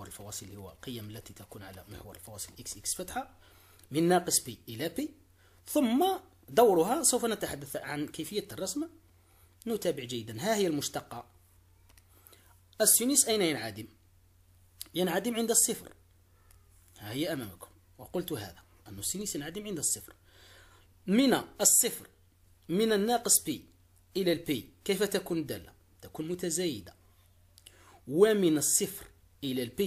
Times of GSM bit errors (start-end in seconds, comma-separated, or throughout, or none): none